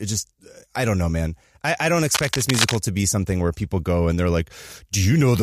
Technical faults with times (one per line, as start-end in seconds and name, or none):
2.14-2.76 cable scratch noise